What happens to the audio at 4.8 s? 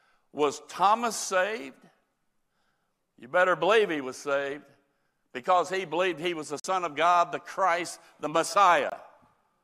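Nothing goes wrong at 4.8 s: the speech runs on intact through that moment, with no dropout, click, distortion or other audible fault.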